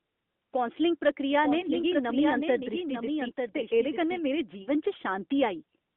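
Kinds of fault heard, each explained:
Lost AMR speech frames: Radio bit errors left frames undecodable. The decoder filled each gap by repeating its last good settings at falling level. A brief 20 ms dip near 1.6 s fits one lost frame. A 40 ms smear near 4.62 s points to two.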